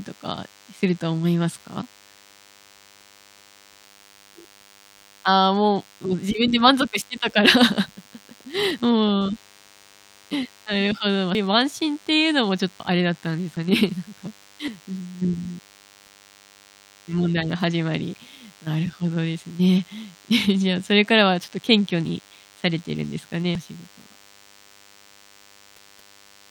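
DECT cordless phone buzz runs through the whole of this speech recording: a thin, steady 100 Hz buzz rich in harmonics, sitting roughly 30 dB below the voice. A nearby DECT handset or base station sends a radio burst every 10 ms, and the audio circuitry rectifies those bursts into the signal, producing the repeating tone. Sudden jumps forward in the speech occur at 3.84, 8.45, 11.35, 12.8, 13.57, 14.68 and 23.55 s, with nothing silent in between. Most skip about a tenth of a second, the one at 11.35 s about 150 ms, and the one at 12.8 s about 300 ms. The likely cause is a dropped buffer (overrun): samples weren't read out before the hardware overwrote them, so the surviving audio on either side was spliced together directly.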